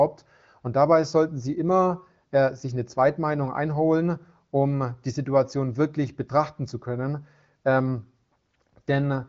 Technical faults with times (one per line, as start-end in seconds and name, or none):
none